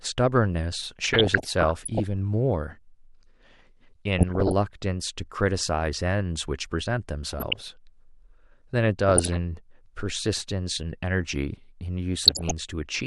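DAB burbling appears five times in the speech: 1.04 to 2.04 s, 4.19 to 4.52 s, 7.33 to 7.73 s, 9.09 to 9.36 s, and 12.25 to 12.51 s. Weak reception let bit errors, roughly 0.4 percent to 1.5 percent, slip past error correction into the MP2 data, so corrupted samples put short blips of noise in individual sub-bands and corrupted scale factors make sub-bands jump in level for up to a frame. The result is burbling over the speech, with the highest error rate in the final burst.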